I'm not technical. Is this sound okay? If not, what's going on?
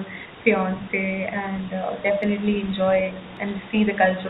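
No. From 0.78 to 0.97 s there is speech suppressed in double talk: the call's echo canceller likely mistook both sides talking at once for echo and turned everything down. The voice briefly dips for a fraction of a second.

From 1.77 s to the end, the sound shows low bit depth without dither. The audio was likely cut down to very few volume steps, about 7 bits, by simply chopping off the detail. Quieter parts turn gritty and grainy, and the roughness shifts with the voice.

At 2.23 s and 3.37 s there are dropped samples. A tiny sliver of audio, a few samples long, was likely skipped, so the sound jumps abruptly. Each one is a single sharp click, far too short to lose any speech.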